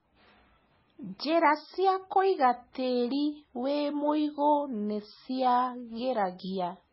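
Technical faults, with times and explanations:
Throughout, MP3 compression: the speech has nothing above 5.6 kHz and a heavy watery, swirling texture, which points to a likely MP3 encode at a very low bitrate, around 16 kbps. Starved of bits, the encoder cuts the treble at a fixed frequency and drops weak frequency lines, which then flicker on and off from frame to frame. That flicker gives the warbling churn, and the missing top end dulls the speech's s sounds and sharp attacks.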